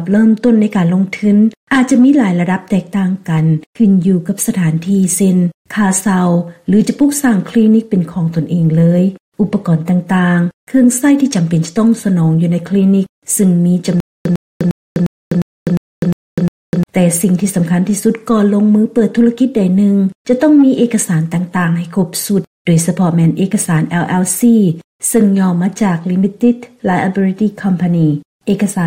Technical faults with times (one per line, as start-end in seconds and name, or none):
14.00-16.83 stutter with silent gaps